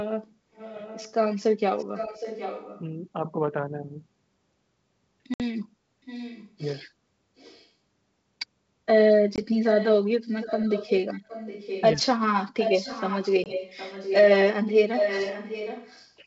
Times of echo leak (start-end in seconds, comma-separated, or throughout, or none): 0.55-1.13, 1.78-2.82, 6.05-6.48, 7.37-7.67, 9.64-11.83, 12.59-14.20, 14.92-16.08